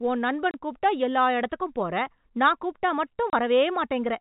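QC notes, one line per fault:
0.51 s and 3.30 s: packet loss filled with silence. Each 30 ms gap, which fits one lost packet, drops to silence with hard edges. Unlike concealment, nothing is repeated or smeared, and the telephone-band G.711 sound resumes unchanged.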